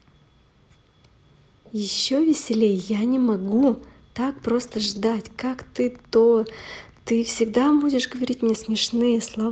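Speech carried over a WebRTC-style call path, where the Opus-type coding at around 32 kbps leaves a ceiling near 8 kHz on a spectrogram. At 2.82 s there is an underrun with held sample: for about 0.4 ms the waveform freezes as a short flat line while the output buffer sits empty. Playback resumes where it stopped, so the join is only a faint tick, and a spectrogram shows at most a hairline vertical streak. There are three stretches of lost packets rebuilt from error correction, at 3.51–3.65 s (80 ms), 4.63–5.09 s (240 ms, the longest), and 8.15–8.21 s (40 ms). The lengths fit separate lost 20 ms frames. In each stretch the decoder plays the low-bitrate backup copy carried in the following packet, so nothing drops out, but the sound turns grainier and noisier. A spectrogram shows smeared, hazier harmonics and a raised noise floor in those bands, with no gap in the waveform.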